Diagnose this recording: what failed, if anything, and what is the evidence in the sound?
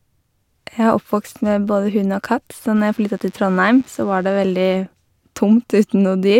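DECT cordless phone buzz, picked up in the analogue wiring: a faint, thin 100 Hz buzz rich in harmonics sits under the speech from 2.76 to 4.76 s, from rectified radio bursts every 10 ms.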